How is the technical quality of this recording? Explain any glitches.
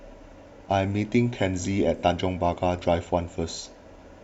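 The speech has one audible glitch, an AAC frame loss with concealment from 1.97 to 2.03 s. For about 43 ms, which fits a single lost AAC frame, the decoder had no data and rebuilt the gap from the previous good frame's spectrum. The result is a brief smeared, noisy or phasey patch rather than silence or a click, which sets it apart from a plain dropout or a hard edit.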